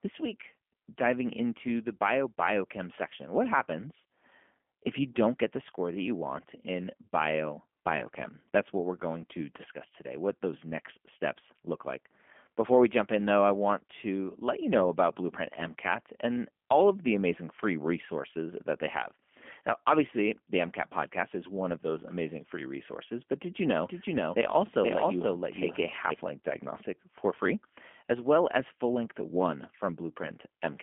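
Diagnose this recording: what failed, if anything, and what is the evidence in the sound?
The codec stage has failed throughout: the speech has passed through G.729. Nothing reaches above 3.5 kHz, and the 200 Hz to 3.4 kHz line band leaves it thin and boxy. The damage is plainly audible as a rough, slightly synthetic texture, because the codec rebuilds each frame from a vocal tract filter, a pitch predictor and a few pulses. A plain band-limited analogue line would sound dull but smooth, without this buzzy, resynthesised grain.

From 23.88 s to 26.14 s, after "but did you know" and before "length diagnostic for free", there is a doubled audio track. A second copy of the speech trails about half a second behind at roughly the same level. It starts and stops abruptly and has no decay or room colour, so it is not an acoustic echo or reverb tail. The likely cause is a second capture through a slower path.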